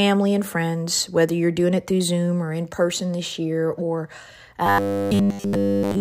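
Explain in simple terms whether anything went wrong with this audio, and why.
After "person this year or", from 4.66 to 6.00 s, speech turns into a metallic 100 Hz buzz. That's robotic sound from repeated short buffers, likely one 10 ms slice looping.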